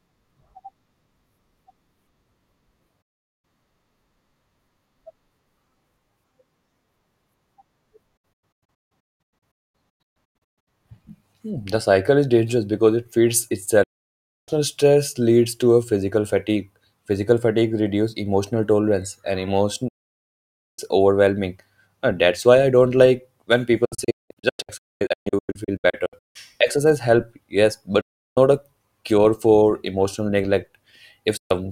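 Digital broadcast dropouts mute the speech at 3.02, 8.17 to 10.68 (scattered short holes, longest 0.22 s), 13.83, 19.88, 23.85 to 26.36 (scattered again), 28.01 and 31.37 s. The receiver lost valid frames, which fits 32 ms frames, and fell silent with 8 ms fades. Waveform and spectrogram show flat, empty blocks.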